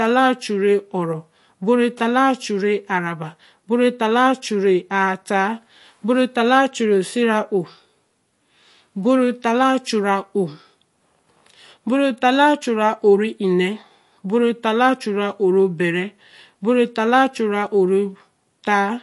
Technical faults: MP3 compression

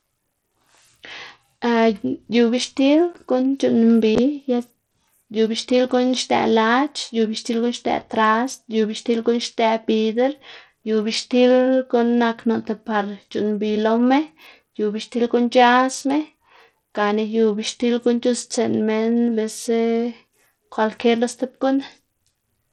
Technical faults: Bluetooth SBC compression

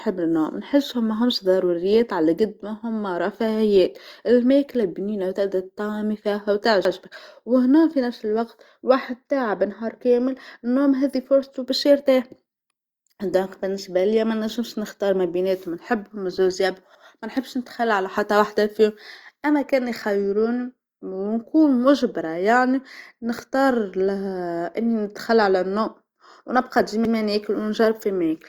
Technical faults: overlapping chunks; loud pop

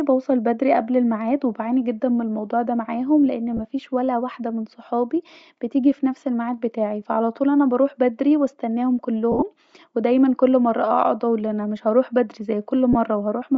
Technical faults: Bluetooth LC3 compression; lost LE Audio frames

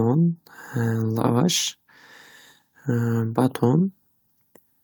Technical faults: none

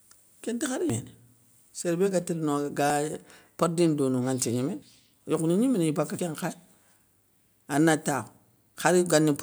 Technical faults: dropped buffer (overrun)

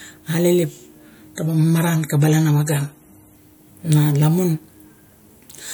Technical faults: adaptive stream at a lower bitrate

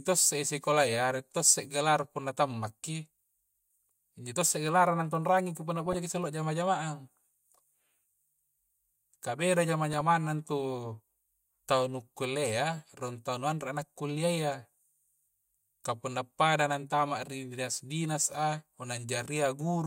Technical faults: DAB burbling

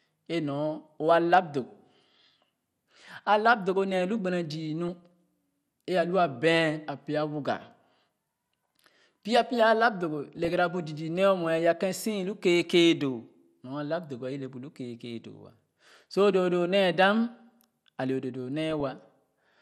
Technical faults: MP2 compression; DAB burbling

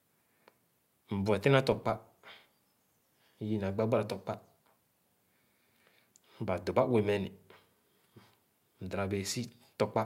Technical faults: filter restarted on every block

